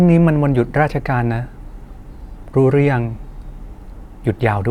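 Nothing in this short speech recording points to a technical fault at any point.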